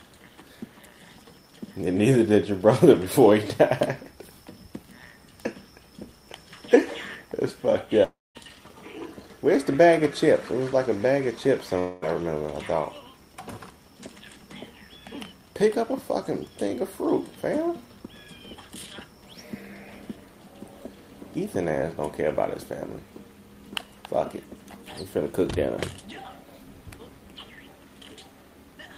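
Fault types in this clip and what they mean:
Long network dropout: at 8.03 to 8.37 s and 11.79 to 12.04 s the sound breaks off, and the last moment is stretched into a fading buzz before the audio resumes further on with the gap skipped. The likely cause is a stall in packet delivery, with the receiver papering over the hole. The first gap loses about 0.32 s and decays into roughly 0.21 s of silence; the second loses about 0.24 s and stays filled throughout.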